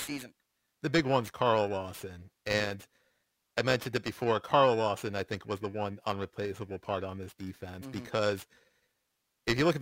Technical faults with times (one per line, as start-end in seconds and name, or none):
0.00-9.82 periodic clock jitter